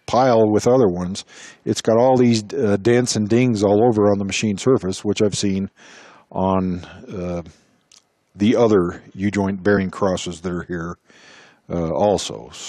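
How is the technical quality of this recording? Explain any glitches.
There is one glitch. From 9.76 to 9.81 s, compressed frames are skipped: about 20 ms of audio drops out as damaged or missing frames go unplayed. The audio jumps ahead by that amount, leaving a discontinuity at the join.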